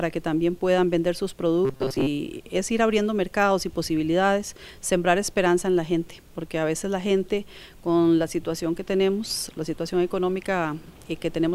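From 1.65 to 2.08 s the sound turns into a rigid, metallic buzz at 133 Hz, robotic sound from repeated short buffers, likely as a stalled stream forces about 7.5 ms chunks to loop. The waveform shows roughly repeating cycles, and the spectrogram shows evenly spaced harmonic lines.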